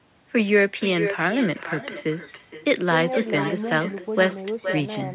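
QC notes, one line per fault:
Throughout, echo with no canceller: each stretch of speech returns about half a second later as a thinner copy about 10 dB down, because the far end's loudspeaker feeds its own microphone and nothing removes that signal before it travels back over the call path.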